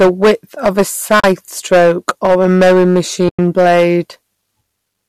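From the first syllable to the end, the speech carries hard clipping. The level is driven about 13 dB past what the chain can pass, so a small but steady share of peaks are sliced flat. This adds a harsh, buzzy fuzz on every loud vowel. It stays locked to loudness, unlike the softer graininess a low-bitrate codec would spread evenly.

At 1.20 to 1.24 s, and again at 3.29 to 3.39 s, the sound drops into silence. This is AAC frame loss with muting. The decoder zeroed the missing blocks, and the overlapping windows fade out and back in. The 40 ms and 100 ms gaps fit whole 10 ms frames from the likely low-delay AAC stream. The edges are soft, which sets these apart from an abrupt dropout.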